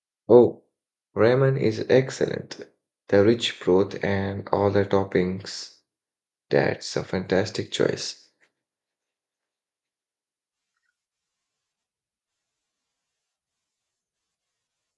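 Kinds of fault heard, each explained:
Nothing stood out on listening to this speech recording.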